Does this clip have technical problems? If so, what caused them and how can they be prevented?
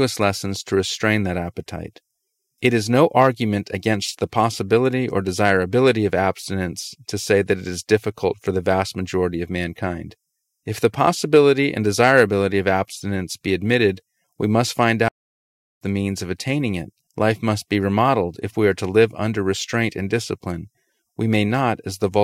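Yes. The player likely ran out of data or had its thread blocked, causing a playback stall: after "admitted we must find" the audio goes silent from 15.08 to 15.81 s, then resumes at "the means of attaining". A deeper playback buffer and a never-blocking audio thread prevent this.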